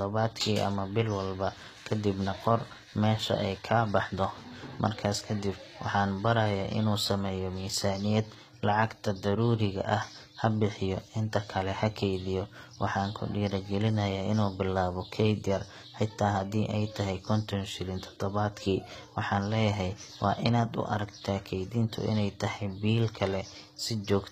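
Sibilants sound gritty and lispy across the whole speech clip, with treble synthetic and nothing above 14.9 kHz, likely from HE-AAC compression at a low bitrate rebuilding highs by band replication.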